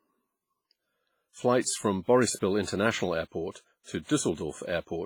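From start to finish the speech carries heavy transform-codec damage, most likely WMA compression at a bitrate around 24 kbps. Long transform blocks smear quantisation noise across tens of milliseconds, so consonants ring and pre-echo while weak spectral lines drop out. The result sounds washy and metallic, with a hiss that swells and fades with the voice. Unlike steady background noise, this hiss follows the signal.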